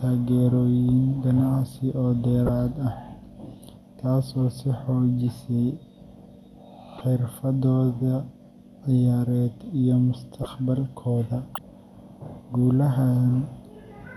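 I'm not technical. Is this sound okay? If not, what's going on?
No. The recording has four short glitches called corrupt frame decoded. Bits of damaged compressed data were played anyway. Each makes a quick chirp or blip: 2.46–2.49 s after "ganacsi oo", 6.98–7.01 s, 10.43–10.46 s after "ciyaareed iyo", and 11.55–11.58 s. The first is loudest.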